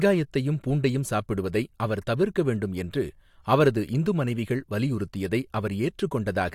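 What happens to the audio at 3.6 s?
Nothing goes wrong at 3.6 s; the speech there carries on intact, with no dropout, click, distortion or other audible fault.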